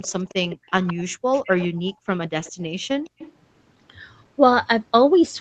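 From 0.01 to 1.02 s a faint delayed copy of the speech trails it by 165 ms, about 20 dB down. This is an echo leak, likely the far side's loudspeaker reaching its microphone past the echo canceller. Unlike room reverberation, it is a distinct repeat rather than a smooth decay. From 1.08 to 1.24 s the background sound is gated by the echo canceller. It dips by about 40 dB for roughly 150 ms while the canceller clamps the microphone, then recovers. Because only the room sound vanishes and no speech is lost or garbled, this is gating rather than a packet-loss gap. The echo returns from 1.32 to 2.08 s, again 165 ms late and about 20 dB down. Within it, from 1.93 to 2.06 s, the background gates again, dropping about 33 dB. Weaker echo scraps follow from 2.44 to 2.66 s at about 30 dB down and from 3.04 to 3.28 s at about 25 dB down.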